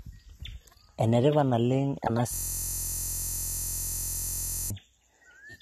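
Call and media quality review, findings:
Whole clip: speech band-limited with nothing above 13 kHz, plus smeared, swirly low-bitrate coding artefacts. Likely low-bitrate audio saved at a high bitrate: a roughly 32 kbit/s AAC-type encode re-saved as high-rate MP3, which cannot restore the removed content.

2.34 to 4.70 s, right after "tipat naleng ena": steady buzz at 43.1 Hz. System hang loop. Host or driver froze while the hardware replayed one 23.22 ms segment about a hundred times, which fits a 1024-sample ring buffer.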